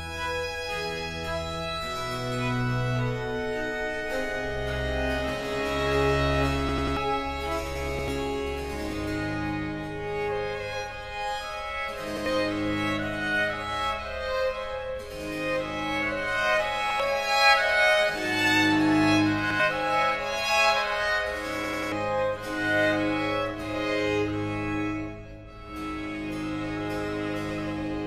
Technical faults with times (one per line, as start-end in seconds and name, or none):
6.69-6.97 repeated buffer
7.99-8.08 repeated buffer
12.17-12.26 repeated buffer
16.90-17.00 repeated buffer
19.50-19.60 repeated buffer
21.64-21.92 repeated buffer